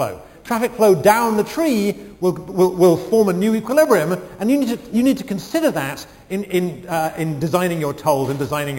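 Imaging from sample-and-hold upsampling runs throughout the clip: each sample was simply repeated to raise the rate without smoothing, which fits a jump from 11 kHz to 44.1 kHz. Mirrored copies appear, the lowest spanning roughly 5.5 to 11 kHz about 20 dB down, heard as a bright metallic fizz tracking the sound.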